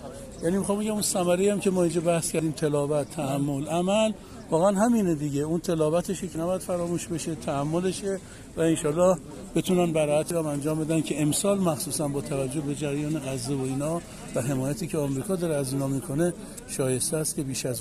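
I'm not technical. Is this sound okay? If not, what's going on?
No, there are small skips. At 2.39, 6.35, 10.30 and 14.26 seconds a tiny slice of the sound, a few hundredths of a second, drops out and the two sides butt straight together, so it jumps rather than pausing. They come almost exactly every four seconds, which points to audio missing between chunks: the recorder likely handles sound in four-second blocks and loses a sliver each time it hands over to the next.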